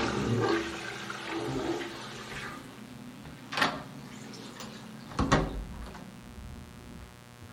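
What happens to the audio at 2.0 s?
At 2.0 s, as throughout the clip, a raspy mains buzz sits fairly low under the sound. Switching spikes twice per 60 Hz cycle spray harmonics into the kHz range, making it gritty rather than a smooth low hum.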